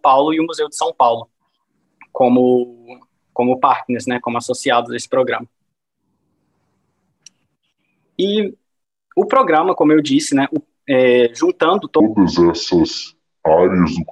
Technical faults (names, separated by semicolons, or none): section at the wrong speed